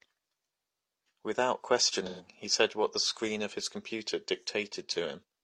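Around 2.06 to 2.26 s there's an AAC frame loss with concealment: roughly 128 ms of the speech went missing, and the decoder patched it from the last good spectrum, leaving a smeared, noisy stretch.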